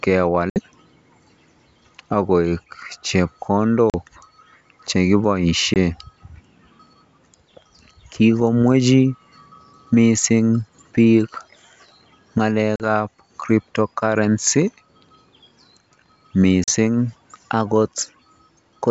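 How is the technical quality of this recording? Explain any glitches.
The recording has five dropouts from packet loss on an ADPCM call, at 0.50–0.59 s, 3.90–3.95 s, 5.74–5.77 s, 12.76–12.86 s and 16.64–16.70 s. Each loses about 20 to 60 ms of audio. Underneath, the wideband sound is clear up to about 7 kHz, which fits G.722 coding at its full rate.

At each gap, one to a few packets never arrived, so the decoder filled the hole with silence. Because the decoder missed those samples, its adaptive predictor and step size drifted away from the sender's. Each gap is a sharp-edged hole, and the speech returns with brief distortion before settling within some tens of milliseconds.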